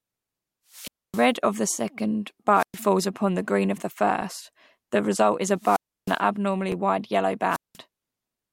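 From 0.70 to 1.31 s a wireless microphone squelch dropout sets in: the FM signal fades, hiss swells, then the receiver mutes for about 262 ms. On a spectrogram this shows as broadband noise, then an empty gap, then the speech returning. More follow at 2.54–2.78 s (113 ms mute), 5.57–6.22 s after "the result is a" (313 ms), and 7.49–7.77 s after "wide yellow" (188 ms). At 4.22 s and at 6.72 s, the latter just after "wide yellow", overlapping chunks replay 6.5 ms at 2.5 s joins, giving a click and a thin vertical line in the spectrogram.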